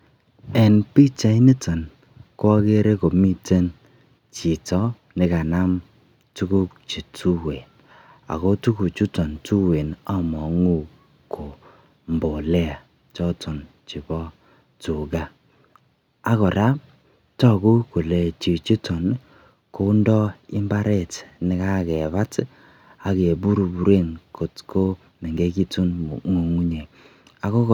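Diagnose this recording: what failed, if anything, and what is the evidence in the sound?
Nothing failed; no fault is audible in this speech.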